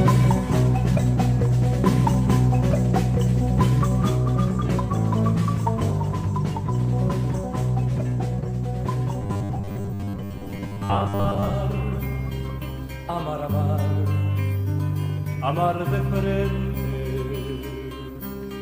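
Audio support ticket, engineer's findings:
Robotic sound from repeated short buffers, 9.22–11.54 s. Rigid metallic buzz at a fixed 100 Hz, i.e. a 10 ms segment looped while about half the audio is skipped. Likely cause: input buffer starvation. Distinct from dropouts: gaps are filled, not silent.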